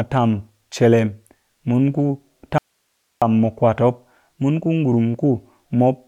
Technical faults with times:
2.58-3.22 audio dropout to a faint residue

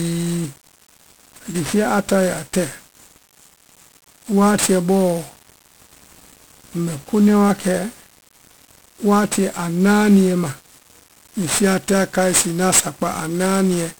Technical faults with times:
0.00-13.99 1-bit DFPWM compression

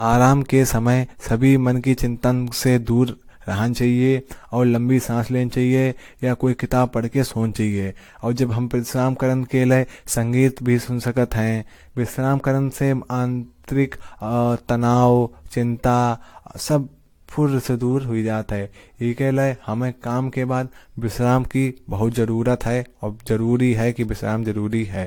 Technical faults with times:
0.00-25.06 generation loss

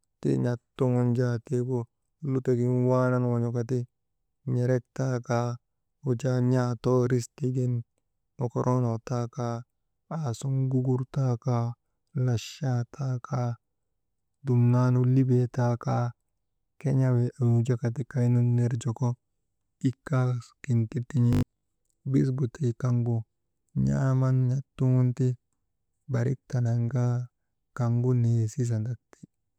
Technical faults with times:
21.33-21.69 robotic sound from repeated short buffers

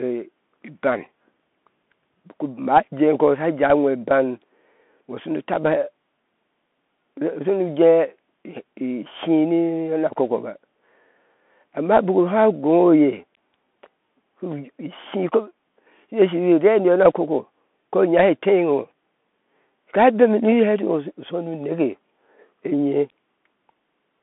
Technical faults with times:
0.00-24.22 Bluetooth CVSD headset codec

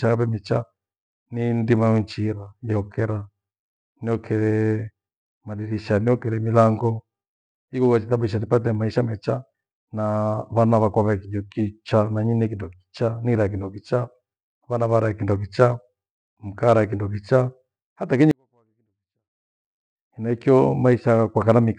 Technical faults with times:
18.31-19.64 24-bit alignment error (too quiet)

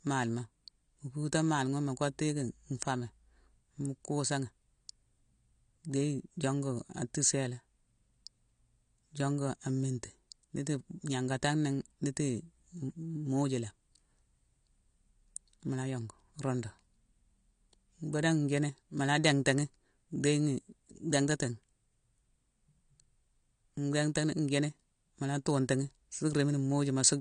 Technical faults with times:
0.00-27.21 AAC compression

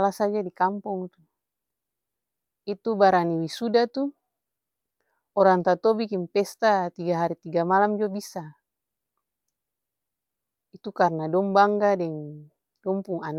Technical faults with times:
none

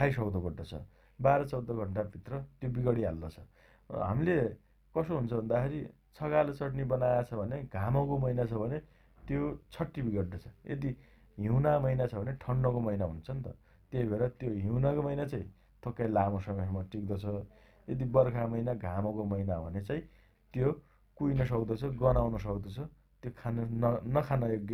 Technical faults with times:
0.00-24.73 overlap-add ripple

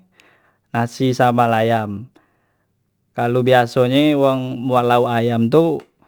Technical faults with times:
0.00-6.08 sample clock jitter

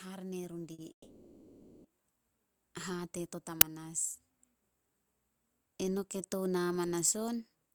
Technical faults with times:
0.73-0.80 short stall from a late packet
0.92-1.86 call audio freeze
3.61 uninitialised buffer

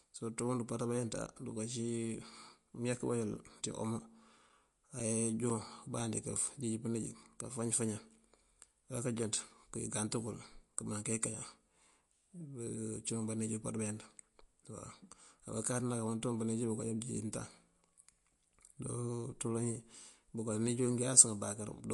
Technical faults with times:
0.00-21.93 MP3 compression
2.49-6.00 periodic USB or driver dropouts

